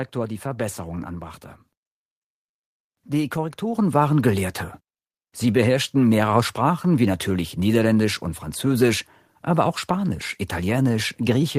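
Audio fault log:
3.75 s microphone volume stepped up: input gain raised at once, lifting speech and background about 6 dB together; the waveform widens and the spectrogram brightens across all bands.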